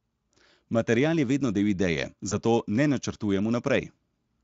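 Right after "je vedno del ideje", around 2.29 to 2.38 s, there's a VoIP packet loss concealed by the speech codec. About 20 ms went missing, which fits a single lost frame. The Speex decoder papered over it by stretching the previous sound, so you get a brief buzzy or noisy smear that takes a moment to settle back.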